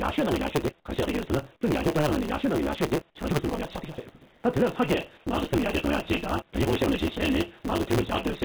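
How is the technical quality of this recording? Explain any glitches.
The recording is technically poor: a constant buzz and rushed timing run through the whole clip, and the background changes briefly in five places.

Block size mismatch (truncated), throughout: Each block's tail is discarded, which fits 512-sample blocks being written. The audio runs 1.6 times fast at near-normal pitch, with a 150 Hz buzz that shows as evenly spaced vertical seams in the spectrogram.

Comfort noise in place of the background, at 0.8, 1.56, 3.1, 4.31 and 5.18 s: For 80 to 200 ms, the textured background becomes smooth, featureless hiss that is about 1 to 15 dB quieter. The likely cause is discontinuous transmission substituting synthetic noise. A spectrogram shows flat, uniform patches.

Nothing above 4 kHz appears, consistent with a narrowband call path.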